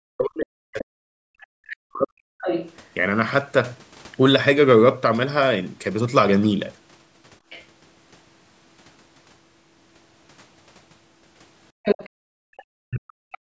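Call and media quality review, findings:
Speech suppressed in double talk, 0.00–2.36 s: voice dips and breaks into pieces, falling by roughly 40 dB at the deepest point, about two seconds affected in total. Likely the echo canceller, unable to separate the near talker from loudspeaker echo, attenuating both. Same symptom 12.78–13.57 s, running to the end of the clip: the voice is cut back hard again, around 0.7 s affected, with the same mechanism.

Other side's voice leaking through, four spots: 2.41–2.73 s, a second voice about 10 dB under the talker; 7.50–7.65 s, faint, about 25 dB under; 11.83–12.09 s, nearly as loud as the talker, about 5 dB under; 12.57–12.64 s, a brief trace about 30 dB under. Likely residual echo the canceller failed to remove from the microphone, with loudspeaker playback getting through.

Background gated by the echo canceller, 11.72–11.83 s: room sound drops out for about 0.1 s, down about 34 dB. 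Again 12.09–12.50 s, about 0.4 s gone, down about 36 dB. The canceller clamps the microphone while the loudspeaker plays and releases afterwards. These dips bracket the loud leak at 11.83 s. The call microphone path's band limit, with nothing above 8 kHz, applies throughout and is normal, not a fault.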